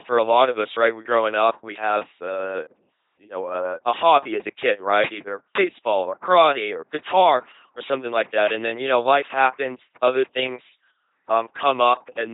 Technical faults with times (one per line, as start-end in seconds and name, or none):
0.00-12.33 LPC-10 vocoder